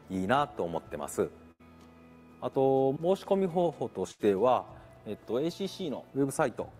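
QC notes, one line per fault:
1.51 to 1.61 s and 4.11 to 4.21 s, burst of packet loss: about 80 ms each is filled by a fading continuation of the preceding sound, not silence, then resumes with audio skipped.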